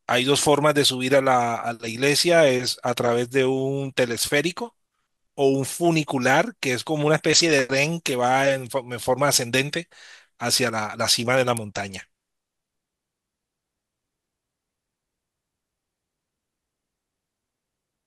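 A speech recording with a single sharp snap at 11.57 s, a very brief click at a peak of roughly -10 dBFS. It is an electrical switching spike, likely from a nearby switch, motor or static discharge arcing and coupling into the audio line.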